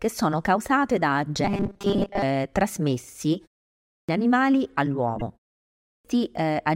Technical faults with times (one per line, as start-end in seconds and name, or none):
1.45-2.22 robotic sound from repeated short buffers
3.77-4.09 clipped start after a pause
5.19-5.22 damaged data in a compressed stream
5.74-6.05 clipped start after a pause